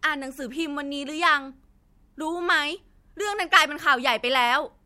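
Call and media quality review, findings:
No audible faults found in this speech recording.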